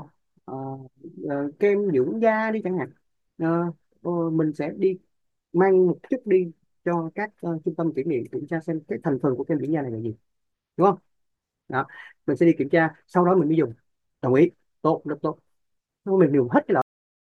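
At 16.82 s the recording suffers a cut-off end: the final stretch of buffers was never written out, so the stream simply stops rather than closing naturally. The speech is severed mid-sound, with no trailing decay or room tail, and the level drops straight to digital silence. That dead silence runs for the remaining 0.4 s of the file, to 17.21 s, making the ending feel abrupt and truncated rather than finished.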